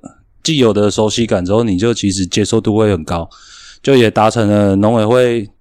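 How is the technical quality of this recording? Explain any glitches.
Nothing in the speech stands out as a glitch, so there aren't any technical faults to walk through here.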